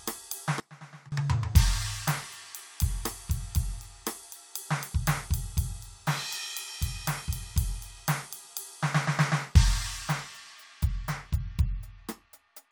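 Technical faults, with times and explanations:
0.60–1.12 s, sudden gain jump: the music abruptly falls by about 21 dB, sitting far quieter for roughly half a second before returning to its previous level at 1.12 s. The change is instantaneous, with no fade in either direction, so everything in the mix drops and recovers together. This likely comes from a digital gain setting or bit shift being applied from one sample to the next without any ramp.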